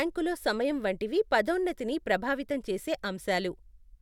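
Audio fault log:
No technical faults are audible anywhere in this speech recording; the signal holds steady in level, timing and frequency content throughout.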